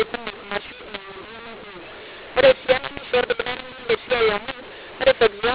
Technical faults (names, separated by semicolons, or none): mu-law and A-law mixed up